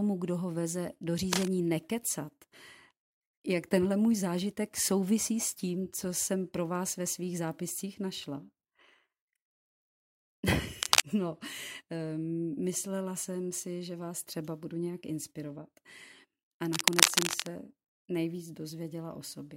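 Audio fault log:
1.33–1.48 s, 10.82–11.01 s, 16.73–17.47 s, cable scratch noise: a worn cable or connector likely shifted, its contact resistance flickering and injecting dense, ragged noise bursts. These are heard as scratchy rustling, level with the speech after "kdo ho veze do", then roughly 10 dB and 5 dB above.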